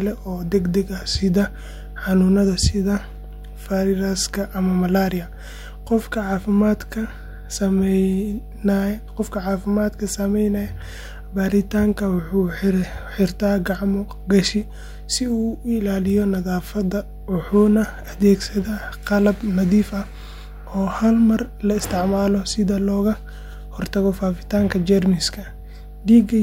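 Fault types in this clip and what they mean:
Mains hum, throughout: a steady 50 Hz tone sits under the speech for the whole clip, fairly prominent at roughly 15 dB below it, the mark of power-line current leaking into the signal path through a ground loop or a nearby transformer.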